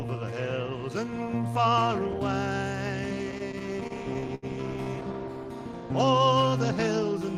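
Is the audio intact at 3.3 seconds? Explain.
No. Repeated stalls (stutter) begin at 3.31 s and run to 4.45 s. Packets reached the receiver late, or slower than they were played out, so the jitter buffer kept running dry. Twelve times the receiver stretched the last sound to bridge the wait, about 209 ms in all, the longest hold 75 ms, filling roughly 18 percent of that stretch. No audio is lost, but it drags and stutters through the span.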